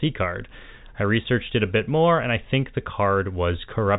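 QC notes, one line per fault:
No faults to note for this speech clip.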